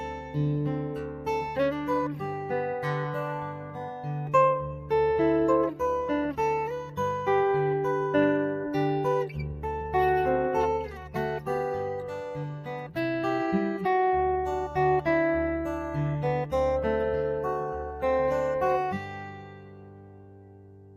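Throughout, a noise suppressor applied to music or sounds treats sustained material as noise, swinging gain by around 10 dB; the waveform envelope pumps while transient spikes survive. Sound cut by the noise suppressor sinks about 6 to 8 dB at 0.0–0.36, 0.79–1.28, 3.39–4.07, 4.65–4.91, 9.28–9.64, 10.88–11.16, 12.5–12.97 and from 19.04 s to the end. These appear as darkened, faded spectrogram regions with truncated decay tails.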